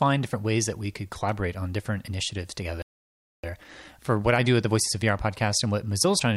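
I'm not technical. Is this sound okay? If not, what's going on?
No, it isn't. Two problems show up, one right after the other.

The first is a playback stall. At 2.82 seconds the sound simply stops. Nothing plays for about 0.61 seconds, until 3.44 seconds. Then it picks up again. This is likely the player running short of data, or being briefly held up, so it had nothing to send to your speakers. It's a gap in delivery, not a gap in the sound itself.

The second is time-compressed catch-up. From 3.44 seconds to the end, the player tries to make up the lost time. It plays the rest about 1.1 times faster than normal. The pitch stays the same, so it doesn't sound squeaky. Instead it feels slightly rushed. That speed-up comes from small pieces being cut out and blended over to shorten the backlog.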